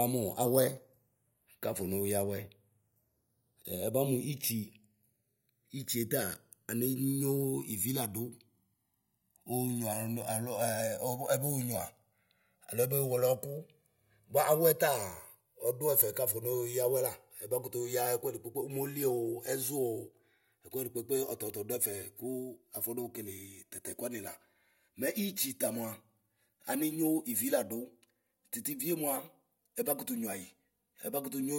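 From start to finish, the two channels drift apart. Each side seems to have been captured on its own clock, with the two clocks disagreeing by something like 150 parts per million, so the offset between left and right keeps creeping until it reaches roughly 4 ms by the end. Fold the speech to mono and the comb-filter notches glide slowly through the spectrum, giving it a lazy, steadily shifting flanged swirl.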